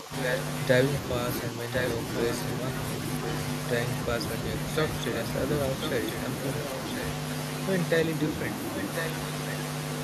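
An echo canceller likely confused double talk for echo and ducked the talker, producing speech suppressed in double talk from 0.00 to 0.13 s (dips of about 10 dB) and 1.51 to 1.73 s (about 5 dB). A loudspeaker's echo canceller likely let echo through, so an echo leak repeats the voice about 1.05 s later at 0.22 to 0.38 s and 1.73 to 1.90 s at roughly full level, then quieter at 5.82 to 6.12 s (about 10 dB down) and 8.77 to 9.09 s (about 5 dB down).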